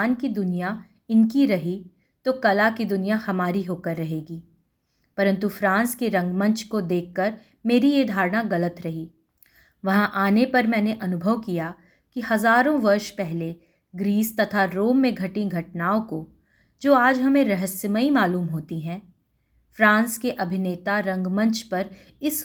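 No technical faults can be heard anywhere in this recording.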